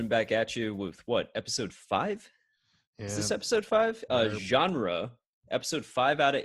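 From 0.78 s, right after "back at you", to the end, channel delay (comb filtering) sets in: one channel lags by roughly a sample, about 0.02 ms, before the mono sum. The first notch sits up near 20 kHz, so the speech only loses top-end air, with no hollow, phasey notches through the audible band.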